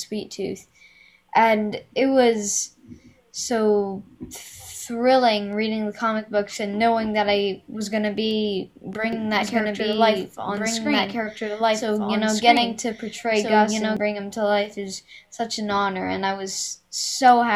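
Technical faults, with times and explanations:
9.13 to 13.97 s, doubled audio track: an identical full-band copy trails about one and a half seconds behind at roughly the same level, with no decay, starting and stopping abruptly. This is likely a second capture on a slower path, or an edit holding two out-of-step copies.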